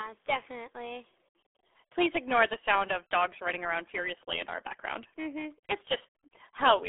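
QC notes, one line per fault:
throughout, RealAudio 14.4 codec: the speech has been squeezed through a dial-up-era speech codec, and the heavy coding damage points to a rate of about 8 kbit/s. The band is held to roughly a 300 Hz to 3.5 kHz telephone line, with nothing at all above 3.8 kHz. Consonant detail and air are gone, so the speech sounds muffled and boxy. The coarse coding of the remaining band adds a gargly, watery texture.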